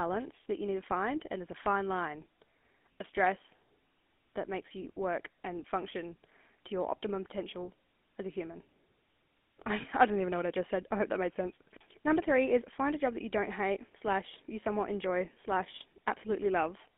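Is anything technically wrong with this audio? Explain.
Yes. Throughout the speech, the GSM full-rate codec is plainly audible. It models the vocal tract and drives it with sparse, regularly spaced excitation pulses, consistent with a 13 kbps coder, leaving a buzzy, gravelly roughness. The line band runs only from 250 Hz to 3.5 kHz, so the sound is thin and muffled.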